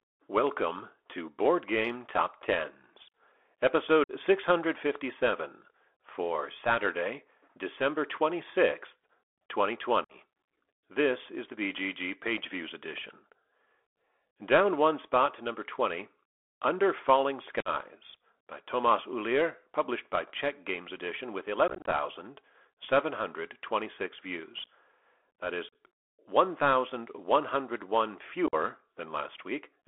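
Throughout, the speech passes through a Bluetooth CVSD headset codec, a one-bit delta modulator whose adaptive step lags behind loud, fast high-frequency detail, confined to a 300 Hz to 3.4 kHz line band. The speech sounds narrow and boxy, with scratchy s sounds over a grainy hiss.

Unconcealed Bluetooth headset packet loss then drops short runs of voice packets with nothing filling the gaps, at 4.04, 10.04, 17.60, 21.68, 25.69 and 28.47 s. Most leave about 50 ms holes with abrupt edges. At 21.68 s, about 120 ms is lost in scattered bursts over 0.24 s, which sounds chopped and crackly.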